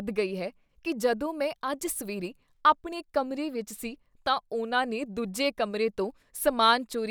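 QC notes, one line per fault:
No faults found.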